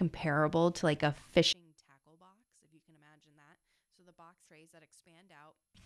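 At 1.17 s a brief glitch cuts into the speech, the sound of damaged data in a compressed stream. A corrupted stretch of the file throws the decoder out of sync, so it garbles what it can and then skips forward to the next valid frame header. On a spectrogram this appears as a thin vertical break in the pattern, and the waveform shows a sudden discontinuity at that point.

From 1.53 s to 5.75 s the speech level falls by about 34 dB. The voice collapses to a faint residue. The likely cause is one channel inverted: with one side's polarity reversed, the centred voice cancels when the stereo pair is folded to mono, and only the small difference between channels remains. The waveform drops to a near-flat trace across that span, and the spectrogram dims sharply.

Inside that quiet section, from 4.44 to 4.48 s, a second damaged-data event gives another short glitch. On the spectrogram this shows as a narrow vertical break.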